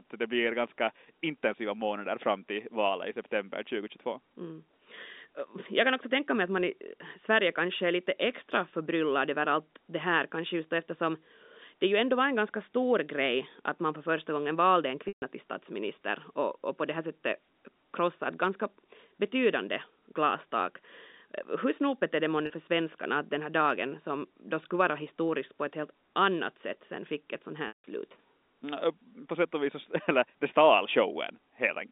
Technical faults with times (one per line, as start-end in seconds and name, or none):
15.08-15.22 packet loss with pitch repetition
22.46-22.50 packet loss with pitch repetition
27.68-27.84 packet loss with pitch repetition